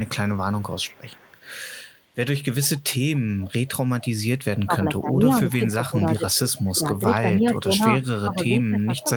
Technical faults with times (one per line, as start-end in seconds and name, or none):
0.05-1.60 echo leak
2.93-4.60 echo leak
4.66-9.16 speech suppressed in double talk
5.86-6.73 echo leak
7.51-7.59 echo leak
8.33-9.02 echo leak